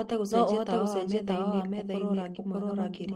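Speech runs through the whole clip with a full-band second copy of itself mixed in, arriving roughly 0.7 s behind and at about the same level. This doubled audio track is most likely caused by the signal being captured a second time through a slower path, or by an edit that leaves two out-of-step copies in place. It differs from an acoustic echo or reverb because the trailing copy is neither quieter nor decaying, and it carries no room colour, just a clean, identical repeat. A brief disturbance follows between 2.33 and 2.37 s. It begins as short concealed packet loss: about 20 ms of audio never arrived, and the receiver bridged roughly 14 ms of that hole by extending the preceding sound. That produces a quick smear or wobble rather than a silent dropout. From 2.35 to 2.37 s, one 20 ms packet was then rebuilt from error correction, with the decoder playing the low-bitrate copy carried in the next packet. 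Concealment invents sound to fill the gap. The rebuilt frame carries the real content but sounds rougher and noisier.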